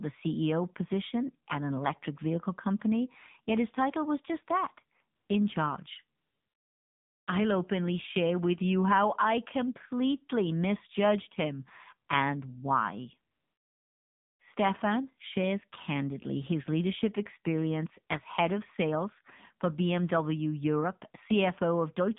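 From start to finish, the speech carries the sound of the AMR narrowband mobile codec. The line passes only about 150 Hz to 3.7 kHz, so everything above is gone and the speech sounds thin and boxed in. The codec rebuilds the voice from a vocal-tract model fed by a few pulses per frame. Here that damage is plainly audible: a buzzy, synthetic edge that fits a low mode near 7.4 kbps.

At 5.16 s the first AMR comfort noise gap appears. It lasts 140 ms and ends at 5.30 s. A longer one runs from 6.18 to 7.28 s, and a third runs from 13.32 to 14.40 s. In each, the phone decided no one was talking and stopped sending speech frames. The receiver filled the space with synthetic noise built from a rough sketch of the background. The real ambience drops out, and a smooth, steady hiss switches in and out in its place.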